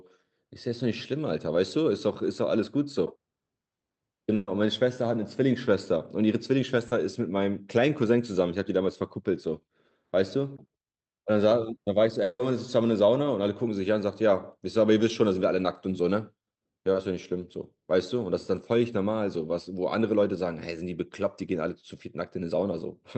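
At 4.35 to 4.50 s, a burst of packet loss leaves the receiver continuing the last sound for about 120 ms. The speech turns into a fading buzz or hiss, then resumes with that stretch missing.

At 6.87 to 6.94 s, a short concealed packet loss is patched from the preceding sound for 40 ms, heard as a brief smear before the real speech blends back in.

At 12.23 to 12.42 s, a long network dropout is the likely cause of a 160 ms fading continuation followed by 30 ms of silence. The speech then picks up further on, its top end capped near 8 kHz by the Opus call path.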